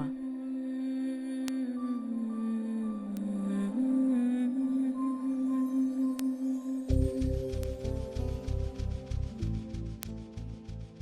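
At 1.48, 3.17, 6.19, 7.63 and 10.03 s there are bit error spikes: a single flipped bit throws the value of one to a few consecutive samples off by a power of two, then it snaps back. Each is heard as one sharp tick unrelated to the surrounding audio, reaching about -14, -20, -14, -20 and -8 dBFS in turn. On the waveform each is a lone vertical needle; on a spectrogram, a thin full-band vertical line.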